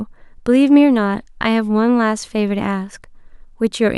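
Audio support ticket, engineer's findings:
No defects found on the speech signal: level, continuity and timing hold steady throughout, with nothing pointing to a capture, transport or playback problem.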